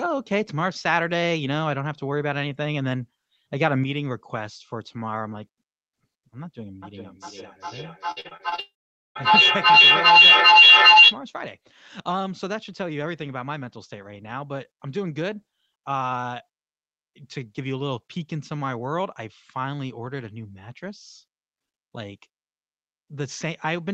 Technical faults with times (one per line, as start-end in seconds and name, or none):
3.84-23.93 one channel drops out
6.82-11.20 feedback howl
8.11-8.60 repeated packet loss (robotic sound)
8.60-9.17 long network dropout